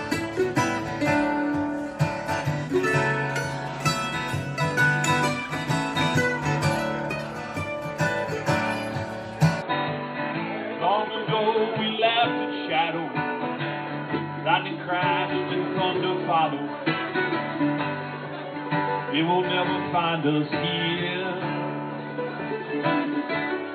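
From 9.62 s to the end, the audio abruptly turns dull and boxy, most likely because the input switched to a poorer device. A spectrogram shows everything above 4.2 kHz cut off at once with no silent gap, and the waveform drops about 5 dB, sitting on a new, faint noise floor.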